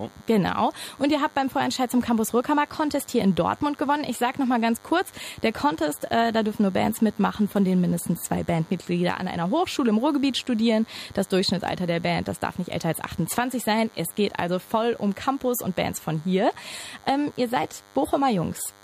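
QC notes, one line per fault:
Throughout: DECT cordless phone buzz. A nearby DECT handset or base station is sending short radio bursts 100 times a second, and something in the audio chain is rectifying that energy into the signal. Each burst becomes a small sharp pulse, so the result is a steady, thin buzz with its fundamental at 100 Hz and a dense stack of harmonics above it. It sits around 30 dB below the main sound but never lets up.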